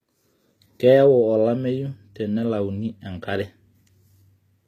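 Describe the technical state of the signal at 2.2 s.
At 2.2 s the speech carries HE-AAC compression, present across the whole clip rather than at that moment alone. The treble is audibly rebuilt from copied lower bands: s sounds turn gritty and lispy, with a metallic sheen, and the damage fits a bitrate near 24 kbps. That points to this codec as the likely cause. A spectrogram shows nothing above 14.8 kHz and a blocky, repeated-looking upper band whose harmonics fail to line up with those below the crossover.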